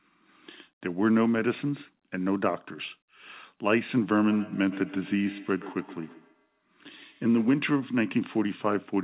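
Feedback echo between two devices runs from 4.3 to 7.75 s. The speech comes back at a steady interval of about a tenth of a second, reaching about 15 dB below the direct speech at its loudest. Two devices in the same room are on the call: one plays what the other's microphone sent, and that microphone picks it up again. Each device's echo canceller removes only its own playback, so this loop slips through. The repeats share the band limit of the call path, which stops at 4 kHz and fits G.711 mu-law.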